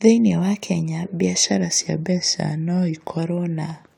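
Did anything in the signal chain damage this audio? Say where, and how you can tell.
Yes. From 1.43 s to 3.19 s the speech abruptly slows by about 6 percent and drops roughly a semitone (about 107 cents), holds that offset steadily, then snaps back to normal. This is most likely a drift correction step at the driver or buffer stage, where clock-matching software changed the playback rate in a single jump to refill its buffer. Unlike tape wow, nothing wobbles, and unlike a pitch shifter, tempo and pitch move together.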